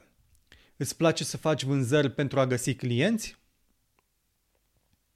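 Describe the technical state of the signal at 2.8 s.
At 2.8 s the speech signal is intact, with no dropout, clipping, glitch or other technical fault audible at that moment.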